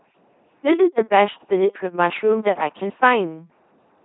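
LPC-10 vocoder damage runs throughout this speech: every moment is rebuilt as pure buzz or hiss through a simple vocal-tract filter, giving a robotic sound consistent with 2.4 kbit/s coding and nothing above 3.9 kHz.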